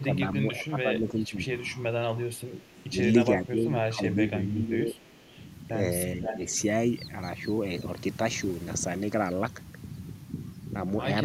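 Speech suppressed in double talk occurs at 0.00–0.21, 0.39–1.48, 2.24–2.95, 3.42–5.39 and 6.17–6.43 s. The level dips by up to about 15 dB, likely because an echo canceller turned the talker down while both sides spoke.

Echo leak occurs at 2.61–2.84 and 4.99–5.44 s as a faint copy 425 ms late, about 35 dB below the speech. At 6.24–6.62 s a much stronger copy arrives 500 ms late, only about 5 dB down, likely loudspeaker pickup the canceller failed to remove.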